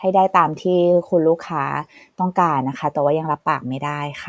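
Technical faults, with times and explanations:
Nothing stood out as a technical fault on listening to this speech recording.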